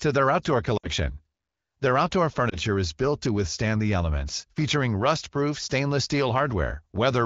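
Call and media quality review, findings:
Lost AMR speech frames, 0.77–0.88 s, after "their outdoor": audio drops to near silence within two frames, then returns weak or rough. Fits a run of three 20 ms frames failing checksum, with the decoder repeating the last pitch and vocal tract settings at falling gain.

Lost AMR speech frames, 2.49–2.58 s, before "is built to withstand": brief dip or warble, fits a single concealed 20 ms frame. Both events ride on the AMR-WB (HD Voice) path at what sounds like about 16 kbit/s.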